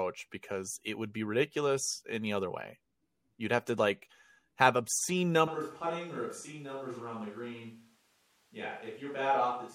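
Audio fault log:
5.48 s to end, switch to a distant microphone: the close microphone's feed likely dropped out right after "to like have obscene", leaving only a farther pickup. The speech turns suddenly roomy and hollow, loses bass, falls roughly 10 dB, and carries more audible background noise until the end.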